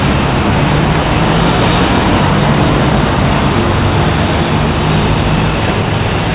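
A skip ahead at 0.52–0.54 s drops roughly 0.4 s of this everyday-sound recording: audio was lost while later audio was already waiting, and both sides were joined with no gap. A jitter buffer speed-up runs from 4.28 to 6.17 s at 108 % speed. Short pitch-period pieces, around 150 ms in total, were cut to shrink an overfull buffer, so the sound hurries without changing pitch. The narrowband call path, with nothing above 4 kHz, fits G.711.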